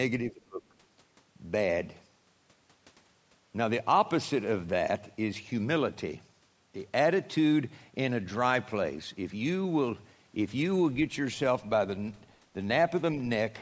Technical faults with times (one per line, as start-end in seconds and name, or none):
0.31-0.62 speech suppressed in double talk